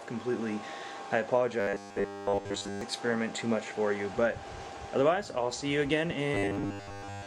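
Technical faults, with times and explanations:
1.60–2.81 s and 6.34–7.26 s, robotic sound from repeated short buffers: a rigid 100 Hz buzz replaces the sound, likely from a 10 ms chunk being replayed while fresh audio was late. The first stretch is entirely repeats, and the closing one mostly repeats.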